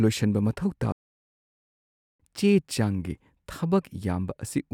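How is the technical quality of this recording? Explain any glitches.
The recording has one clear glitch. At 0.92 s, right after "ꯂꯣꯏꯁꯟꯕ ꯃꯊꯧ", a playback stall cuts the speech to silence until 2.20 s, about 1.27 s. The player likely ran out of data. The gap appears as a flat waveform and a blank spectrogram column.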